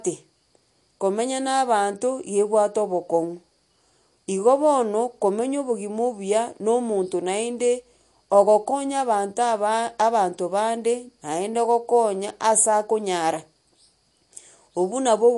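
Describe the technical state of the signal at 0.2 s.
At 0.2 s the speech sounds watery and swirly, with a metallic shimmer on s sounds and nothing above 11.3 kHz, as it does throughout the clip. This is likely MP3 compression at a low bitrate near 48 kbps, cutting the treble and toggling weak frequency lines frame to frame.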